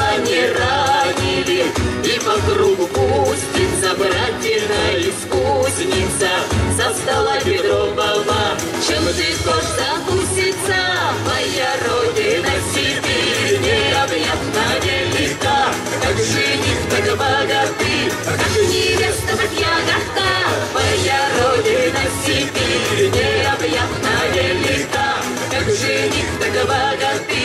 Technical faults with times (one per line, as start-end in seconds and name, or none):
none